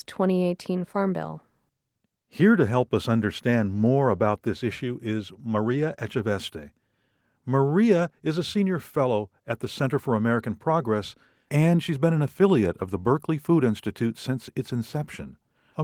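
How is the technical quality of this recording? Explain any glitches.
No glitches to point out here; nothing in this recording calls for an explanation.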